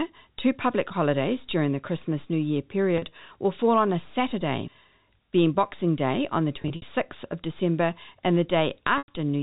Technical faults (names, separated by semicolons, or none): packet loss with pitch repetition